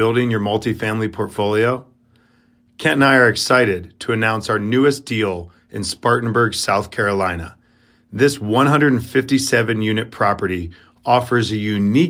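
No technical faults are audible anywhere in the recording.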